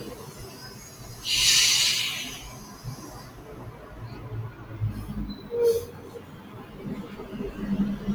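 A speech-oriented noise suppressor was left running across this recording of non-speech sounds, treating steady material as noise so the level pumps and sinks, swinging by around 15 dB. Between 6.18 and 6.52 s the noise suppressor cuts the sound itself, pulling it down by about 5 dB for roughly a third of a second.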